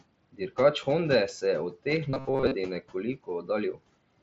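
Speech recorded over a Bluetooth headset link carries three separate faults, with room noise sitting about 20 dB below the voice and the mSBC wideband codec leaving its usual band limit near 8 kHz on the spectrogram. At 1.96 s, just after "se je od", there is a concealed Bluetooth headset packet loss: a gap of about 7.5 ms, which fits a single lost frame, was patched by continuing the waveform with a best-matching copy of the preceding cycle. It is nearly inaudible. The waveform shows one slightly too-regular period, and the spectrogram shows at most a hairline smear of harmonics. From 2.10 to 2.55 s the voice turns into robotic sound from repeated short buffers, a rigid metallic buzz at 133 Hz. That pitch matches a chunk of roughly 7.5 ms being replayed, and most of this stretch is repeats rather than fresh audio, likely because new audio arrived too slowly. The waveform shows identical short cycles stamped out in a row, and the spectrogram shows flat, evenly spaced horizontal lines at multiples of 133 Hz instead of moving speech harmonics. 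Between 3.16 and 3.49 s comes speech cut by the noise suppressor, which treated quieter parts of the voice as background and pulled them down by up to about 13 dB over something like a tenth of a second and more in total. The affected parts sound swallowed or faint. The waveform envelope dips abruptly, and on the spectrogram the energy there fades toward the noise floor.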